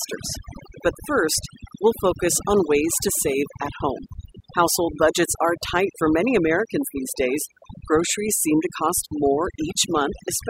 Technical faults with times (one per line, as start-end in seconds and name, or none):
0.00-10.49 overdone noise removal